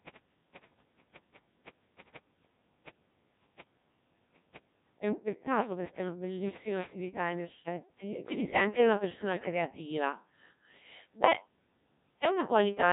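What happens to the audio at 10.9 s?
At 10.9 s the speech is still inside the Codec 2 vocoder damage that runs through the whole clip. The decoder does not rebuild the original waveform: it resynthesises the voice from sine waves driven only by pitch, voicing, energy and a coarse spectral envelope. The heavy artefacts point to a rate around 1.3 kbit/s. The result at that moment is robotic and buzzy, with nothing above 3.8 kHz.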